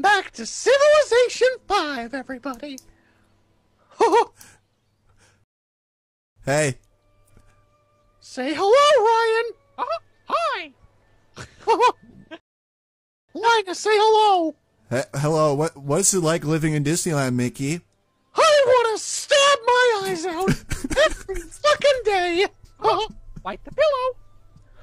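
Rebuffering stalls occur at 5.44 to 6.36 s and 12.40 to 13.29 s: the player exhausted its downloaded audio, fell silent, then resumed exactly where it stopped once data arrived. Nothing is skipped, but each pause adds roughly 0.9 s of dead air.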